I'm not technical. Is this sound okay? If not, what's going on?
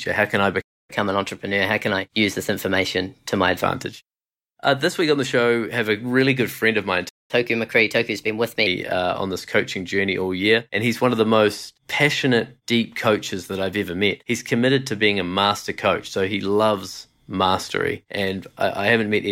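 No. A playback stall happens twice. At 0.61 s, just after "can I", the speech cuts to silence for about 0.27 s, and at 7.09 s, after "good friend of mine", it drops out again for about 0.20 s. The likely cause is the player running short of incoming audio, or being briefly held up, so it had nothing to send to the speakers until it recovered.

Each stall is followed by a catch-up at higher speed. From 0.90 to 3.63 s the speech runs about 1.1 times faster and sounds about a semitone and a half higher. From 7.31 to 8.67 s it runs 1.15 times faster, about two semitones higher. The player is rushing through the audio that piled up during the pause so it can get back on schedule, which raises the pitch along with the speed.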